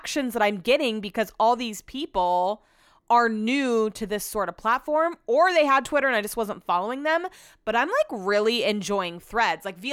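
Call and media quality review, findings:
No audible faults found in this speech recording; nothing to flag for follow-up.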